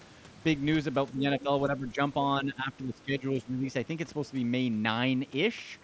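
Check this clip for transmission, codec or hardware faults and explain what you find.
Yes, there is a fault: speech suppressed in double talk, at 1.12–1.49 s, 1.67–2.0 s and 2.41–3.65 s. The level dips by about 5 dB in the first stretch and about 10 dB in the later two. The likely cause is an echo canceller that mistook overlapping far-end speech for echo and ducked everything. Unlike packet-loss dropouts, these are partial, uneven dips tied to overlap, not abrupt gaps. Throughout, the audio also carries a Bluetooth mSBC headset codec, with nothing above 8 kHz and light graininess.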